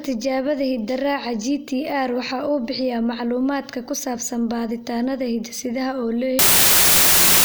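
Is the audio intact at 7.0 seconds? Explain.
No. From 6.39 s to the end of the clip at 7.44 s there is a wrong sample width fault. Audio written as 32-bit integers is read as packed 24-bit integers, so many samples take bytes from two neighbours. Only some values keep the real signal's top bits. Loud noise buries the speech, which plays at 0.75 times speed and lower pitch. A plain sample-rate error would shift speed and pitch without this noise.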